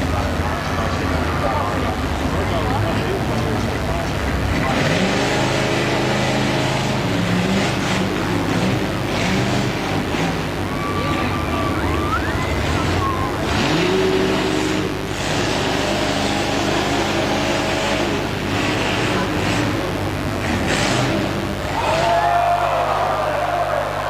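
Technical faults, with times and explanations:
Throughout, mains buzz: switching spikes twice per 50 Hz cycle add harmonics reaching several kilohertz, giving a steady, raspy buzz only about 10 dB below the signal.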